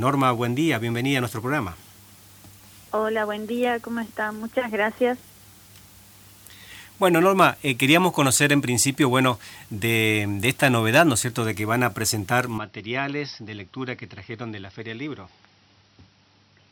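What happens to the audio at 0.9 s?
Nothing goes wrong at 0.9 s, and the audio plays through that moment intact.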